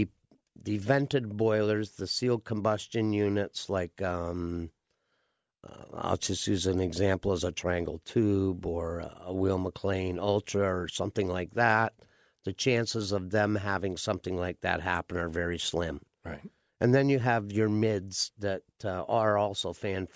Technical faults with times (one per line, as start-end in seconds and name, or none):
none